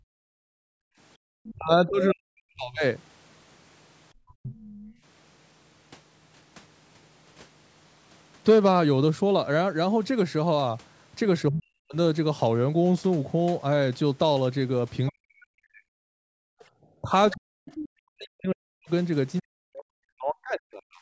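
Background gated by the echo canceller, from 0.00 to 1.25 s: with the far end playing through the loudspeaker, the canceller clamped the microphone down, and the room sound sinks by about 40 dB for roughly a second before recovering. Two shorter gatings of about a tenth of a second follow, at 4.82 to 4.97 s, dipping about 15 dB, and at 16.55 to 16.74 s, about 34 dB. Each leaves a brief hole in the background that closes when the canceller releases.

Other side's voice leaking through, from 1.44 to 4.93 s: a second, fainter voice sits about 20 dB below the talker, likely loudspeaker playback that the echo canceller failed to subtract from the microphone feed. It returns from 15.07 to 17.89 s, stronger this time at around 15 dB below the talker.

Speech suppressed in double talk, from 1.53 to 4.54 s: while that leaked voice overlaps, the talker's own speech dips and breaks up in pieces, as deep as around 40 dB, over about a second and a half in total. 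With both sides active, the canceller likely could not tell the near voice from the echo and attenuated everything. A short instance hits 11.51 to 11.95 s, and a long one runs from 15.11 s to the end at 21.01 s, with roughly four seconds of chopped, muffled speech in all.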